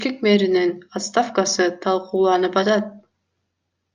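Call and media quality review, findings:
Resampler restarted on every block, throughout the speech. Regular ticking at 25 Hz, present only under signal, fits 40 ms blocks converted independently, likely 44.1 to 48 kHz. Converter state reset per block, so each block edge interpolates against missing neighbours and leaves a small error.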